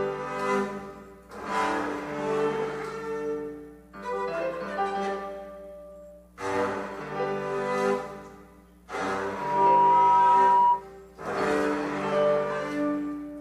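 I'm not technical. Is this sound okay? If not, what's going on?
No. From 9.22 to 10.84 s there is a loudspeaker feedback squeal: a single whistling tone near 965 Hz that swells from nothing to well above the rest of the sound in under half a second. It happens when a microphone picks up the speaker it is feeding and the sound loops round and round, getting louder each pass. Unlike a steady electrical hum or whine, it grows on its own rather than sitting at a fixed level throughout.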